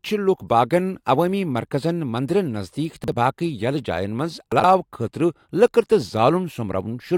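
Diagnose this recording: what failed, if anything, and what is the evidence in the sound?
Jumbled blips at 3.04–3.12 s and, after "جاین منٛز", 4.52–4.64 s: chunks out of order in buffering, 40 ms blocks played one and two chunks late.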